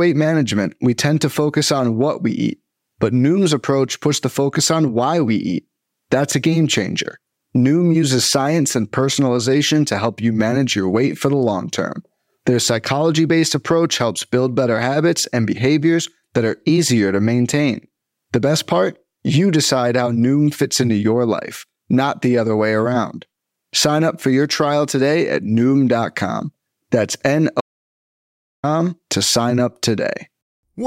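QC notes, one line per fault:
27.61–28.63 s, audio dropout to silence: the speech cuts off mid-flow and returns at "to sign up" after about 1.03 s of silence, with no room tone, likely from the input briefly disconnecting or muting. The waveform shows a flat line and the spectrogram a fully black gap.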